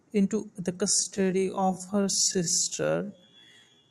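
From 0.8 s, just after "into the", a time-stretched section slows the speech to 0.57x without lowering pitch. The drag, rather than a deepening, sets it apart from a tape-speed fault. Likely software fitting it to length.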